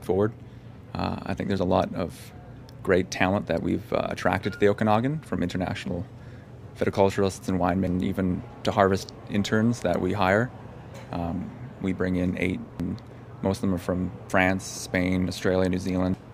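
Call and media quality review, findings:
Damaged data in compressed stream at 7.87 s, 12.80 s and 16.14 s. Corrupt bytes break frame parsing; decoder loses sync, hunts for next frame header. Result: brief chirp or blip.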